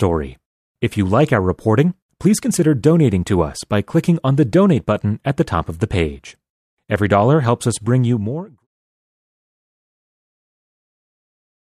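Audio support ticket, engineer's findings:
No defects found in the signal path; the only level change is an editor-style smooth fade-out beginning around 8 s and reaching silence at 8.67 s, with no click or hard edge at either end.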